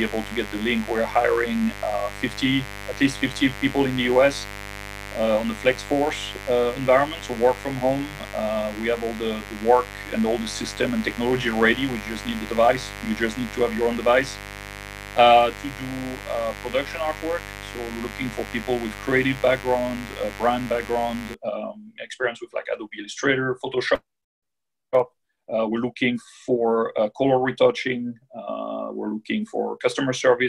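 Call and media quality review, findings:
Steady raspy mains buzz, 0.0–21.34 s, then clears. Roughly 15 dB under the programme. Spiky interference at twice per 50 Hz cycle, harmonics reaching several kHz; points to dimmer, rectifier or unshielded cable coupling into the chain.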